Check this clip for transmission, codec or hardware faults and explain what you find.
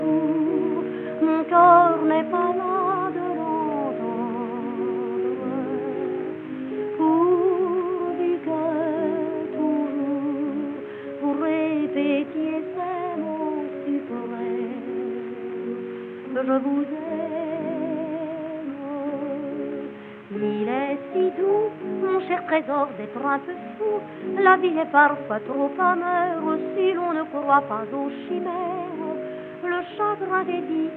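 Nothing audible here points to a transmission, codec or hardware fault at any point in the clip.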